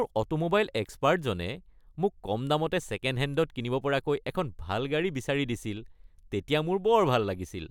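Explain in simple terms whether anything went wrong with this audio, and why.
Nothing went wrong with this recording, as no technical fault can be heard anywhere in it. The speech comes through steadily, with nothing breaking up, dropping out or getting in the way.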